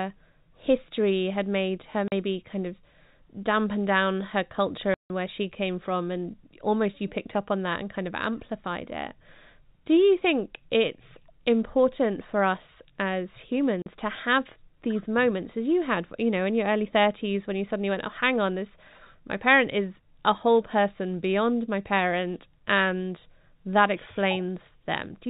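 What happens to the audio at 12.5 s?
Nothing goes wrong at 12.5 s: the speech carries on intact, with only the steady narrowband telephone character of G.711 coding, which keeps nothing above 4 kHz.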